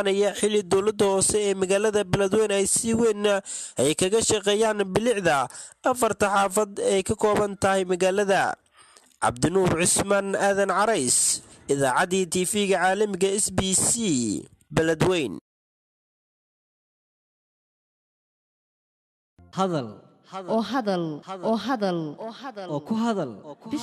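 No technical faults detected anywhere in the recording.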